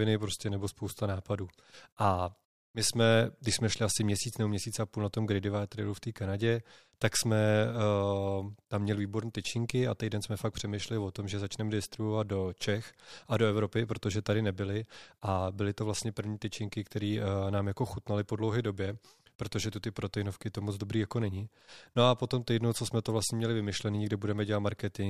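No technical faults are audible.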